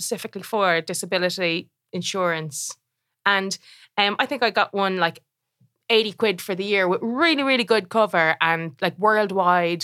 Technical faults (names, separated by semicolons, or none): none